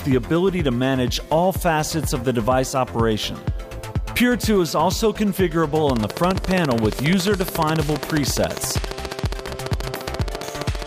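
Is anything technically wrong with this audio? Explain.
Yes. From 5.9 s to 10.83 s there is a train of clicks, most likely caused by interference from nearby equipment or a faulty connection or power supply. Something is injecting short pulses into the signal path at a steady 14.6 per second, about seventy in all, each with much the same shape. The result is a regular ticking that stands well above the sound, with peaks roughly 15 dB over it, and it keeps going through quieter moments too.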